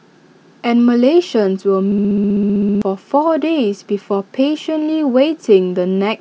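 At 1.92 s the speech locks into a system hang loop that lasts until about 2.82 s. Something froze upstream while the audio hardware kept replaying the same stretch of its ring buffer, so one 64 ms chunk repeats exactly, around fourteen times, at 15.6 Hz. That gives a rapid machine-gun stutter rather than a buzz. The loop length fits a 1024-sample buffer, and roughly a second of real audio never comes through.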